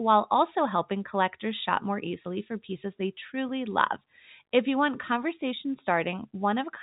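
No faults are audible in the speech; it carries the narrow band of G.711 telephone coding, with nothing above about 3.8 kHz.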